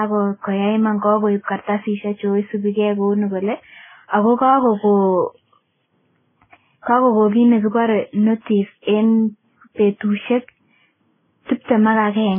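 Right from the start and all the way through, the speech sounds dull and boxed-in, with nothing above 3.5 kHz, plus a layered mix of swirly, watery smearing and gritty warble. That stacked texture is likely transcoding between lossy codecs. It fits a low-bitrate MP3 pass, then WMA, then Vorbis, each one chewing on the previous artefacts and adding its own, while the lowest cut-off in the chain stays.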